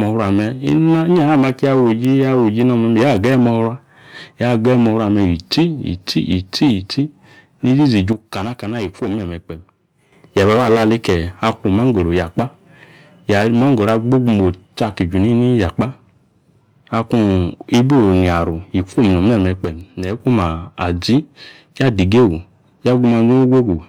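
At 8.13 s the speech and its background noise drop together by about 8 dB, then jump back at 10.12 s. A second sudden gain jump, about 6 dB down, spans 19.64 to 20.20 s. Both are likely an unramped digital gain change.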